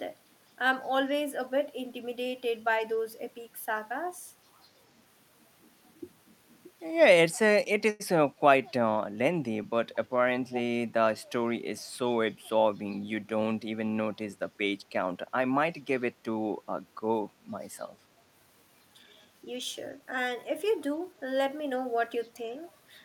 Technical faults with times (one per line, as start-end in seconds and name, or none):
7.90-8.02 short stall from a late packet
10.50-10.61 echo leak